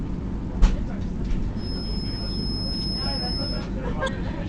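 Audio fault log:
4.05–4.09 s, damaged data in a compressed stream: for about 40 ms near the end, the decoder hits frames whose bytes are wrong, whether lost, zeroed or overwritten, and cannot rebuild the audio from them. It either outputs garbage reconstructed from corrupt coefficients or drops those frames while it hunts for the next valid frame header. That brief loss of sync is what produces the sharp, unnatural blip at this point before normal decoding resumes.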